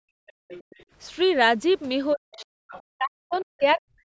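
A short speech clip from a call, and the echo canceller is having a rough time. Right from the start, 0 to 0.48 s, the background is gated by the echo canceller: the room tone gets clamped down hard, by about 40 dB at its deepest, for roughly 400 ms in total. The canceller decided the loudspeaker was active and ducked the mic, so the ambience just falls into a hole and comes back when it releases. Overlapping that, from 0.27 to 0.84 s, and again briefly at 2.68 to 2.82 s, you can hear a second, fainter voice sitting roughly 20 dB under the talker. That's the other side's voice leaking through, likely residual loudspeaker echo the canceller didn't fully subtract from the mic signal. Then there's speech suppressed in double talk. From 2.14 to 2.6 s, and again from 2.94 s to the end, the talker's own voice sinks, dropping by something like 40 dB at its deepest over roughly half a second and then roughly 700 ms. 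It sounds pulled under. The likely cause is both ends talking at once, with the canceller unable to tell the near talker from the echo, so it attenuates everything together.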